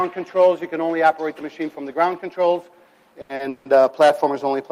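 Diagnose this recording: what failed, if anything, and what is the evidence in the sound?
Short stalls from late packets at 3.21 to 3.31 s and 3.35 to 3.41 s, a network and jitter-buffer fault. In each, the sound holds on its last moment instead of moving forward, for about 80 ms and then about 40 ms, with a faint buzzy, slightly dipped texture. Nothing is skipped afterward. The audio resumes exactly where it paused, so the receiver filled the gap while the late packet arrived, adding delay without losing content.

A call audio freeze from 3.49 to 3.67 s, also at the network and buffer stage. The sound is carried forward as a fading buzz for about 160 ms and never drops fully to silence. It then picks up from the same point with nothing missing. The likely cause is packets held up in transit, draining the jitter buffer so the receiver had to synthesise filler.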